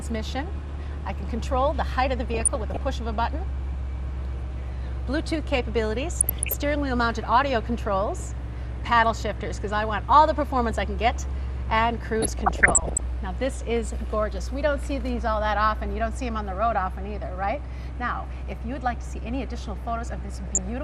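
MP2 compression runs through the whole clip, with plainly audible damage that likely comes from MPEG Layer II coding at a low rate, one that fits around 80 kbps. The coder divides the spectrum into 32 sub-bands and, short of bits, drops the upper ones entirely and quantises the rest roughly. The sound is dull, with a gurgling, grainy edge and high bands that flicker in and out.

DAB burbling breaks in at 2.34 to 2.81 s, 6.20 to 6.54 s, 12.21 to 13.01 s (the longest), and 20.47 to 20.58 s. Reception errors of roughly 0.4 to 0.7 percent of bits slip past error correction into the MP2 stream, corrupting samples and scale factors so individual sub-bands leap in level for up to a frame. Each burst brings short blips of noise in single sub-bands laid over the sound.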